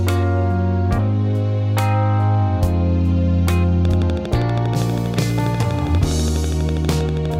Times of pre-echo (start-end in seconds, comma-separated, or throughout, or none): none